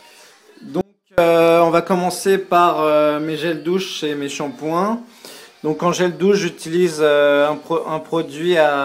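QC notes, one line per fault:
0.81–1.18 s, audio dropout to a faint residue. The sound cuts abruptly for 0.37 s, leaving only a faint leak about 35 dB down. Likely signal loss on a live path.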